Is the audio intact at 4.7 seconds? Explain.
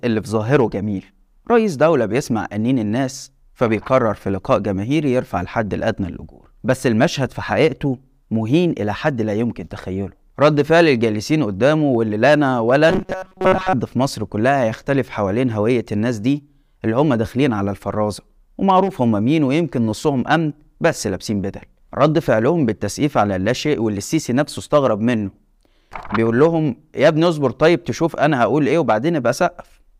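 Yes, at 4.7 seconds the speech is intact, with no audible fault at that point.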